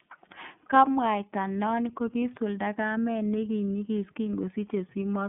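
Throughout the speech, iLBC codec coding in 30 ms independent frames limits the band to about 150 Hz to 3.5 kHz, cutting everything above 3.8 kHz, and leaves audible roughness and a synthetic edge.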